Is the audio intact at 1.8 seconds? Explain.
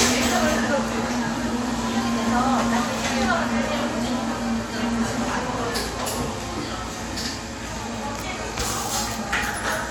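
Yes, the audio is intact at 1.8 seconds, with no dropout, click, distortion or other fault at that point.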